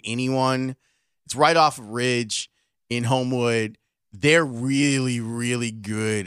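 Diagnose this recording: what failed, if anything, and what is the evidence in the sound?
Nothing in the speech points to a failure at any stage of the chain. No event in the sound calls for a diagnosis.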